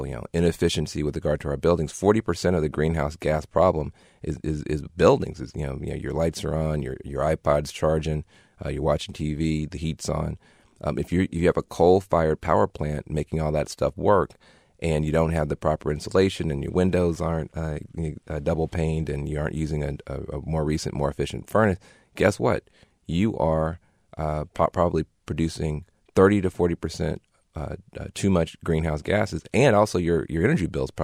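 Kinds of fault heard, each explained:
Sample clock jitter: a faint hiss and grainy roughness runs through the whole clip, following the sound's level and brightness and sitting roughly 50 dB below it. The converter clock wanders by under a microsecond, so samples land at slightly wrong instants.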